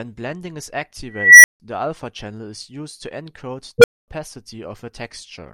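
At 1.10 s the speech is interrupted by an unstable filter: a recursive stage has gone unstable, so a tone of around 2 kHz swells over about 344 ms, clips hard, then overflows into 160 ms of silence. A second one at 3.78 s rings near 500 Hz, climbs in just 58 ms and drops out for 240 ms. The spectrogram shows bright horizontal lines followed by blank gaps. The waveform shows flat-topped bursts, then flatline.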